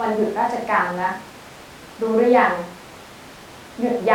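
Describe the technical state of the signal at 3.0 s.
At 3.0 s the speech signal is intact, with no audible dropout, distortion or other fault.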